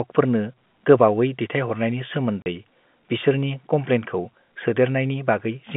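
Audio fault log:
2.42–2.46 s, packet loss filled with silence: a 40 ms hole where the audio drops to dead silence, with abrupt edges, which fits two consecutive 20 ms packets going missing on this narrowband telephone-coded speech line.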